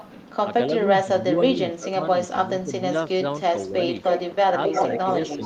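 Echo leak at 0.00–0.12 s: a faint copy of the speech, roughly 20 dB down, trails 263 ms behind. The cause is likely a loudspeaker on the far end whose echo canceller let part of the microphone pickup return down the line.

Speech suppressed in double talk from 1.03 to 2.85 s: for about a second in total the talker's level sinks, by as much as roughly 15 dB, while the other side speaks. The likely cause is an echo canceller that mistook the overlap for echo and turned both down. The same fault returns briefly at 3.72–3.81 s as a slight dip of about 5 dB.

Echo leak from 3.94 s to the end: the 263 ms echo comes back much stronger, only about 5 dB under the speech, again likely from the far end's canceller passing its loudspeaker sound back.

Speech suppressed in double talk from 4.48 s to the end: overlapping with that echo, the speech is pushed down by roughly 10 dB, likely because the canceller could not separate the talker from the returning echo.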